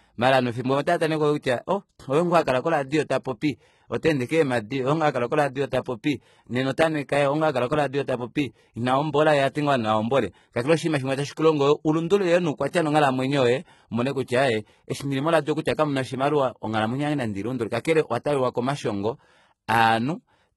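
Across the whole speech recording the top end sounds synthetic: sibilants come out gritty and lispy, with a metallic sheen, and nothing at all sits above about 11.8 kHz. This is likely HE-AAC compression, heavily applied at a rate that fits roughly 16 kbps. Only the lower spectrum is truly coded, and the treble is regenerated by copying lower bands upward under a coarse envelope, so its harmonics no longer line up with those beneath.

At 12.71 to 12.73 s, a short hiss leads into a sharp attack, which lands softened and smeared rather than crisp. This is pre-echo, spread over about 20 ms. The transform codec distributes quantisation noise evenly across its block, and because the attack falls late in that block, noise sized for the loud onset also fills the quiet instant just before it.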